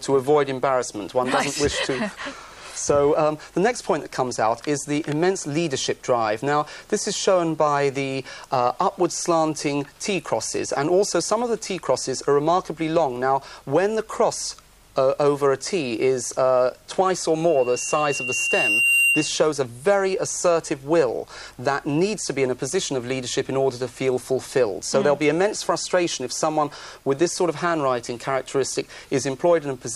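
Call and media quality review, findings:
Loudspeaker feedback squeal, 17.48–19.49 s: 2.8 kHz tone builds over about 1.5 s; mic–speaker loop gain above one. Swelling, unlike steady interference tones.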